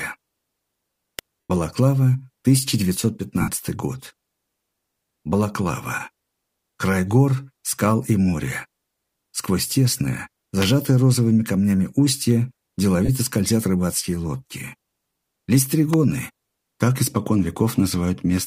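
At 1.19 s a sharp click sits on top of the sound, most likely an arc from a nearby switch, motor or static discharge that coupled into the audio line as an electrical switching spike. Soon after, at 1.45 to 1.50 s, LE Audio frames are lost, about 90 ms worth, which fits roughly a dozen short LC3 frames. The decoder fills the hole by repeating the last spectrum with scrambled phase and fading it, so tonal content briefly dissolves into a noisy, hissing smear that thins out rather than cutting cleanly. The same lost LE Audio frames recur at 3.41 to 3.48 s, covering about 67.5 ms, with the same grainy wash. A second switching spike appears at 10.62 to 10.64 s as a sharp click. A shorter loss at 13.05 to 13.09 s, about 30 ms, gives only a quick rough blur. A final switching spike lands at 15.93 s as a sharp click.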